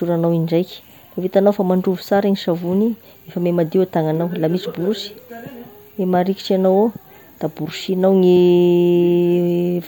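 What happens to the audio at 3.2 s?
Nothing goes wrong at 3.2 s; the speech carries on intact through that moment with no dropout, click or distortion.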